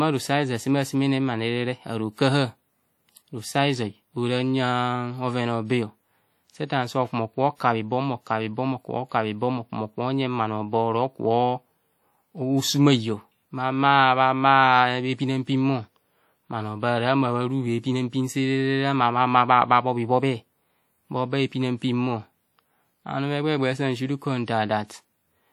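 Throughout the speech, consonants and vowel onsets carry a plainly audible ringing smear, and a washy hiss rises and falls with the voice instead of sitting at a steady level. The likely cause is WMA compression at a low rate, consistent with around 48 kbps: long transform blocks spread quantisation noise over tens of milliseconds around each sound, and weak spectral lines are discarded, even though content still extends up to about 20.1 kHz.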